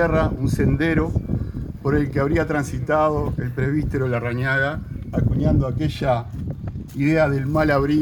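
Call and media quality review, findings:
No audible faults found.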